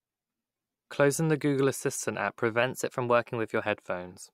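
Right after "assistant app", at 2.63 s, the speech jumps about 6% faster and rises roughly a semitone (103 cents) in one step. It holds there until 3.66 s, then snaps back to normal. This points to a drift correction step: clock-matching software likely changed its playback rate abruptly to rebalance its buffer. Unlike tape wow, the change is instant and level rather than gliding. Unlike a pitch-shift glitch, tempo and pitch move together.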